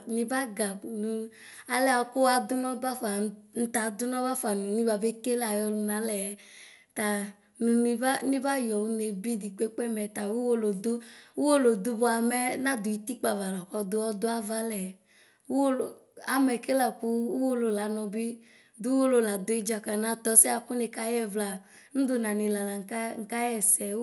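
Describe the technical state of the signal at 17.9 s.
At 17.9 s the speech falls inside a run of resampler restarted on every block, from 15.7 to 18.0 s. Each 100 ms block was rate-converted in isolation, which fits an upsampling from 24 kHz to 48 kHz, so its edges lack true neighbouring samples. The result is a regular tick at 10 Hz, present only while signal is present.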